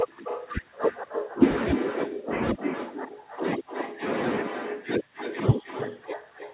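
Echo with no canceller runs through the whole recording. The far end is playing the call over a loudspeaker, its microphone picks that playback up, and nothing strips it out before it returns. Every phrase is trailed, around a third of a second later, by a second copy about 8 dB quieter and thinner. Both copies are confined below 4 kHz, which points to a narrowband telephone codec on the call path.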